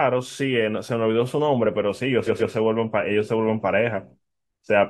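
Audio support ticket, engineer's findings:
Repeated frames: compressed frames written or sent more than once, so the decoder replays the same audio. This causes a stutter at 0.30 s, where a 43 ms block plays twice. At 2.26–2.52 s a 128 ms block plays three times, adding 256 ms.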